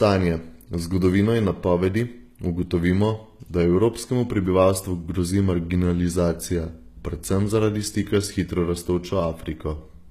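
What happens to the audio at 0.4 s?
At 0.4 s the speech carries the same codec damage present across the whole clip, likely from HE-AAC compression, with artefacts that fits a rate around 20 kbps. Only the lower spectrum is properly coded; the treble is rebuilt by copying lower bands upward under a coarse envelope, so its harmonics don't line up with those below. S sounds come out gritty, metallic or lispy, and nothing remains above 15 kHz.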